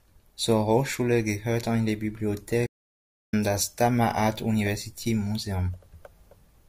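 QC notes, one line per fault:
2.67–3.33 s, audio dropout to silence: the speech cuts off abruptly mid-flow and the signal falls to silence for about 0.66 s, with no room tone or noise floor underneath, then resumes just as abruptly. Whatever was spoken in that span is missing. The cause is likely a momentary loss of the input, from a disconnect, a link failure or an accidental mute, while the recorder kept writing silence.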